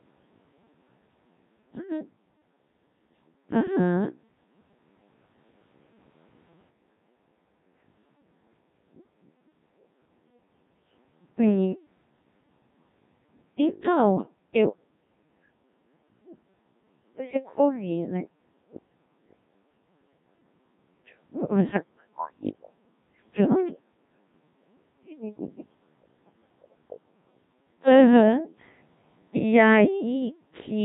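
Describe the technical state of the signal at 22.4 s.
At 22.4 s the signal is inside a burst of the other side's voice leaking through, running from 22.19 to 22.7 s. A second voice sits on top of the talker, roughly 5 dB louder than the main speech. The likely cause is an echo canceller that failed to strip loudspeaker playback out of the microphone feed.

Underneath that, the whole clip carries Codec 2 vocoder damage, and it is heavy here. The voice is rebuilt from pitch, voicing, energy and a coarse spectral envelope using sine waves instead of the original waveform, which fits a rate near 1.3 kbit/s. The speech sounds robotic and buzzy, and the overlapping voice gets badly garbled.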